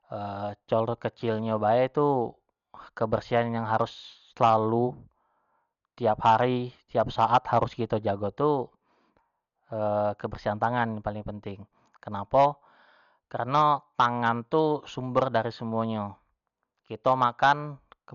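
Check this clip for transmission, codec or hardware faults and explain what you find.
One codec fault runs through the whole clip: heavy damage consistent with Dolby Digital compression, the likely cause. The speech has nothing above about 6.9 kHz, so it sounds dull, and a rough, fluttering noise clings to voiced tones. The encoder appears starved, which fits a low bitrate around 48 kbps. It narrowed the band and left many frequency lines without mantissa bits, and the decoder filled those gaps with dither noise, producing the grainy texture.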